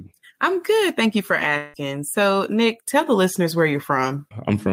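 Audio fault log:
1.57–1.76 s, long network dropout: the speech gives way to a buzzy, smeared continuation of the last sound for about 164 ms. It fades but never quite reaches silence before real audio comes back. About 160 ms of speech is simply gone, so the sound picks up further along rather than where it broke off. Likely a run of packets that never arrived, with the receiver stretching out what it last had to cover the gap.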